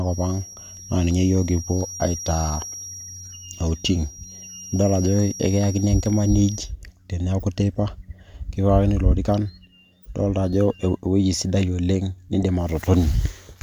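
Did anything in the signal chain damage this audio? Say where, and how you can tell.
Yes. A loudspeaker-to-microphone loop, likely sitting right at the edge of feedback in the acoustic path, leaves a feedback whistle near 5.7 kHz from the start to about 6.74 s. It hangs roughly 15 dB below the speech as a thin, steady, slightly wavering tone.

At the codec or storage stage, compressed frames were skipped between 0.48 and 0.57 s. Frames never reached the output, so the audio jumps forward by a few milliseconds.

Also in the codec path, a corrupt frame decoded three times: at 7.40–7.43 s (a couple of frames, peaking near about −30 dBFS), 10.02–10.08 s (a few frames, about −35 dBFS), and 12.43 s (about −15 dBFS). Flipped bits misplace spectral energy, producing short errors heard as a chirp, squeak, blip or burst of noise.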